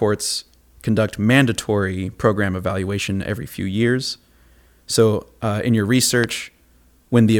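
At 6.24 s, lasting until 6.26 s, a single loud pop cuts across the speech, standing well above its level. The likely cause is a sudden voltage step or pulse, from a plug, switch, static discharge or driver glitch, entering the signal path and being shaped by the circuitry after it. The speech carries on unbroken beneath the thump, which separates it from a dropout click, where the sound itself briefly vanishes or jumps.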